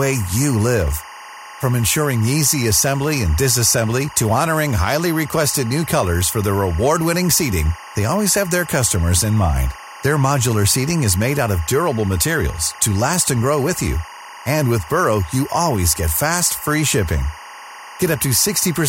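Timecode bleed runs throughout the speech: linear timecode from an adjacent track or cable has leaked into the recording. Its square wave flips between tones around 1 and 2 kHz, framed at 24 per second, giving a steady chirping warble roughly 20 dB below the speech.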